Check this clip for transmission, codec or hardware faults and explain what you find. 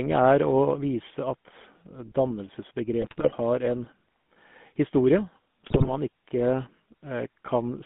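Two faults are present. The speech runs through a GSM full-rate codec from start to finish, and GSM bit errors break it up three times.

The GSM full-rate codec affects the whole clip. The speech has a buzzy, gravelly edge. The codec rebuilds the voice from a vocal-tract filter excited by sparse, regular pulses, so fine detail in the excitation is lost. That is the roughness. The band sits between about 150 Hz and 3.5 kHz, and nothing above it survives. The character fits the 13 kbps full-rate scheme.

GSM bit errors strike at 3.02 to 3.35 s, 5.66 to 5.90 s and 7.47 to 7.54 s. Corrupted bits reach the decoder and spoil its filter, pitch and gain values. Affected frames come out with a bent spectrum or a sudden jump in level. The speech turns to squawks, pops and gargling. The first two bursts are longer and denser, spanning many frames, which points to a weak link. The last is brief and milder.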